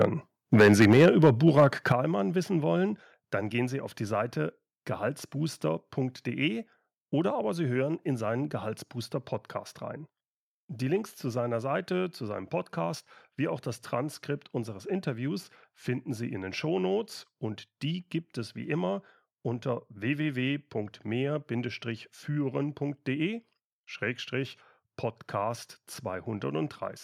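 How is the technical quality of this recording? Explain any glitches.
The opening two seconds have two related problems: microphone overload and the microphone volume being stepped down.

Microphone overload occurs from 0.01 to 0.05 s and again from 0.53 to 1.64 s. The input gain was likely set too high, so peaks ran about 5 dB and then about 9 dB past the converter's ceiling and had their tops sheared flat. A small share of samples, a few percent at most, is clipped, giving the loudest syllables a harsh, crackly edge.

The microphone volume is stepped down at 0.93 s by about 4 dB and at 1.92 s by about 9 dB. This is likely the call software reacting to the clipping by lowering the device's input level in abrupt steps instead of gradually. Voice and background both drop suddenly at each point, and the first cut lands in the middle of the overloaded stretch.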